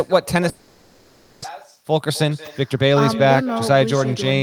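From the start and all the way through, the speech is trailed by an echo with no canceller. The far end is evidently playing the call over a loudspeaker, its mic catches it, and nothing strips it out, so every phrase comes back around 300 ms later at about 17 dB down. It sounds like a faint, thin shadow tagging along just behind the talker.

Then at 0.49 s things go wrong until 1.46 s, and the likely culprit is a long network dropout. Instead of going quiet, the receiver papers over the hole for about 950 ms, stretching the last bit of sound into a buzzy, smeared tail that never quite drops to silence. When the audio picks back up, roughly 600 ms of real content has simply gone missing, and the stream is now running something like a third of a second later than before.

From 1.76 s to 4.35 s you can hear the jitter buffer speed-up as the receiver claws back that extra delay. It snips out tiny pitch-period-sized slices over and over, trimming a few hundred milliseconds in total, so the speech plays at about 112% of normal speed. 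The pitch stays put, but the delivery feels rushed, as if the talker suddenly got impatient.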